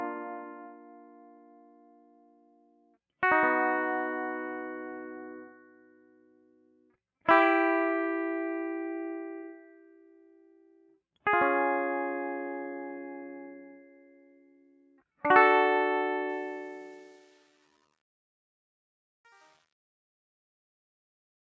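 This music clip has a speech-oriented noise suppressor left running throughout, treating sustained tones and ambience as noise and swinging the level by roughly 15 dB, so the music pumps and thins. The sound cut by the noise suppressor shows as distinct dips from 0.35 to 2.97 s, 5.47 to 6.95 s, 9.52 to 10.99 s, 13.66 to 15.02 s and 17.17 to 17.79 s, sinking held material by up to about 12 dB. From 16.29 s to the end, the fade-out carries truncation distortion. The level stage behaves like one keeping only about 9 bits without dither, so the tail turns gritty from 16.44 s onward.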